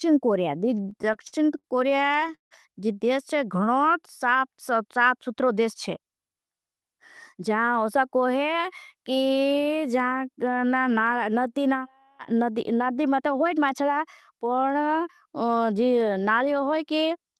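Repeated stalls (stutter) run from 0.75 to 2.53 s. Packets reached the receiver late or more slowly than they were played out, so the jitter buffer emptied 17 times. Each time, the receiver stretched the last sound to bridge the wait, for 414 ms in total, about 23% of that stretch. The longest gap, 162 ms, fades out. Nothing is lost, but the speech hitches and drags in short jerks.

Jitter buffer speed-up occurs at 5.34 to 6.37 s and again at 13.20 to 13.61 s. The buffer held more audio than its target. To cut that extra delay, the receiver trimmed out short pitch-period-length slices many times in a row, removing about a tenth of a second in the first stretch and roughly half that in the second. Speech there runs at 110% speed with unchanged pitch and sounds briefly hurried. Throughout, the Opus call path limits the bandwidth to about 12 kHz and adds its usual coding noise.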